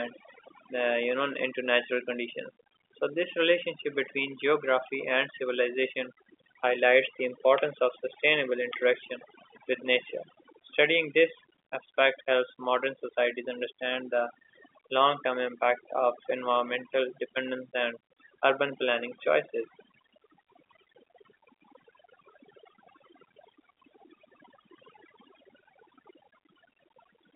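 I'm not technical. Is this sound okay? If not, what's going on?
No. A noise reduction tool was turned up too far, so this is overdone noise removal, and it runs the whole way through. Whenever part of the sound came close to what the tool judged to be background hiss, it cut that part down hard, taking quiet bits of the voice along with it. The result is near-silent gaps with twinkling specks. The narrow, phone-line quality comes from normal telephone coding.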